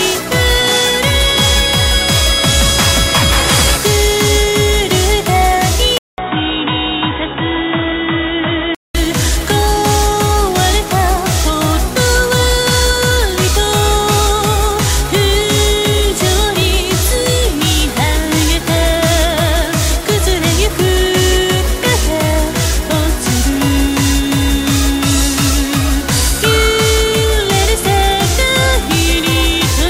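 Input switched to a poorer device, from 5.98 to 8.95 s. After a 200 ms gap the sound drops about 5 dB, turns dull and boxy with nothing above 3.8 kHz, and picks up a faint new noise floor, likely from a narrower-band microphone or headset profile.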